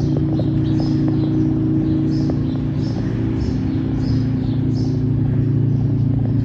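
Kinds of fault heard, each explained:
No technical fault can be heard in this audio. There is nothing to list for any kind.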